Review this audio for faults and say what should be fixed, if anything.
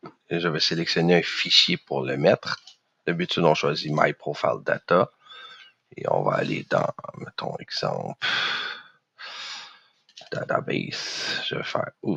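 A noise suppressor built for speech has been left on across the whole clip. It treats sustained and ambient content as noise, so the level swings by around 10 dB as the gain is pulled down on held material and released on attacks. The result is audible pumping and a thinned, fluttering texture. Transients get through largely intact while tails and steady tones sink, which is the signature of speech-oriented suppression applied to non-speech audio.

Several passages are cut much harder than the surrounding material, where the suppressor has classified the sound itself as noise. These occur at 0.00–0.31 s, 2.57–3.07 s, 5.09–6.00 s, 6.93–7.12 s, 8.83–9.21 s and 9.69–10.32 s. The deepest drops reach about 21 dB, and about 18 dB at 6.93 s. Each cut lasts from a fifth of a second to nearly three-quarters of a second. Decaying and sustained portions collapse in level or lose their tails early, while sharper onsets survive.

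To prevent this, disable or bypass speech noise suppression on this path, or switch it to a music or raw-audio mode, so that steady and decaying content is passed unprocessed.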